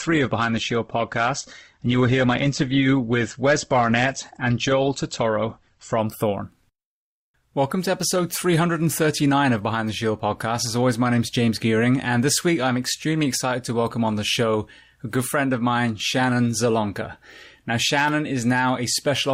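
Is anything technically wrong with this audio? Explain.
Yes. An adaptive stream starting at a low bitrate: from 0 to 6.0 s the speech lacks treble above 8.2 kHz, with heavier codec smearing, which fits a low-rate Opus tier, before quality jumps abruptly.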